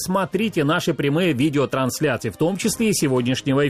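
No technical faults can be heard in this clip: the signal runs without dropouts, discontinuities or level problems of any kind.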